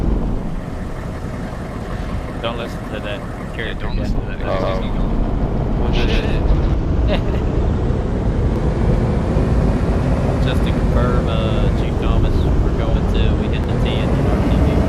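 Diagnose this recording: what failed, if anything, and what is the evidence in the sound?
From 4.42 to 6.74 s there's a doubled audio track: a second full-band copy sits roughly 150 ms behind, about as loud as the original, with no decay or room colour. It cuts in and out abruptly, likely a second, slower capture path or loopback being mixed in.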